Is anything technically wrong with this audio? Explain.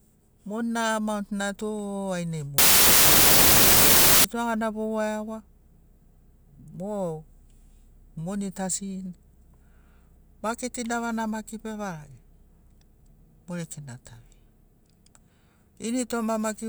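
Yes. Wrong sample width from 2.58 to 4.25 s: audio stored as packed 24-bit integers is read back as 32-bit integers, so each value borrows a byte from its neighbour and the sample boundaries drift out of step. Only some values keep the true top bits, so the speech survives faintly under harsh, loud noise. With each four-byte read spanning one and a third stored samples, the passage also runs about 1.33 times too fast, raising the pitch.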